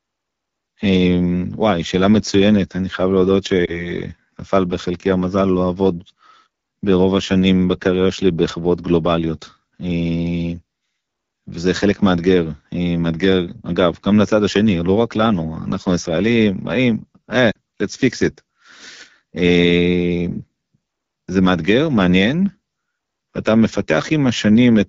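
This speech clip was carried over the AMR wideband (HD Voice) codec at one of its two lowest modes. The roughness fits the 8.85 kbit/s rate. At that bit budget the pulse-driven model of the vocal tract can't capture the detail of the speech, and the band from 6.4 to 7 kHz is only filled with shaped noise. Throughout, the speech sounds plainly rough and raspy. Radio errors also caused lost AMR speech frames at two points. Each failed frame's checksum, and the decoder covered the gap by repeating the last good pitch and vocal tract settings at falling gain. From 3.66 to 3.85 s there is a brief dip or warble, which fits a single lost 20 ms frame. From 17.51 to 17.58 s the sound drops to near silence, which fits two consecutive lost frames, roughly 40 ms of missing speech, before the decoder recovers.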